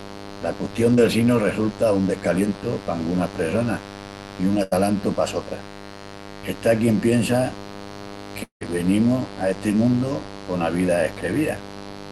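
Mains buzz runs through the whole clip: a steady, raspy 50 Hz buzz sitting fairly close to the speech level. Sharp switching spikes at twice the mains rate, from something like a dimmer, rectifier or unshielded cable, spread harmonics well up into the kilohertz range.

Short concealed packet loss at 0.95 to 0.99 s, just before "sinu resulta un": about 20 ms of audio never reached the decoder in time. The receiver extended the preceding sound to cover the hole and blended back, leaving a brief smear or wobble.

Burst of packet loss at 4.63 to 4.73 s: roughly 80 ms in a row arrived too late or not at all. The receiver continued the last sound while turning it down, so a short held buzz or fading hiss replaces the missing stretch before the speech resumes further on.

Long network dropout at 8.43 to 8.63 s: about 180 ms of speech is gone. The last sound is stretched into a fading buzz or hiss for around 170 ms, then roughly a tenth of a second of near-silence follows before the speech returns past the missing part. 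The likely cause is that nothing arrived over the network for that stretch.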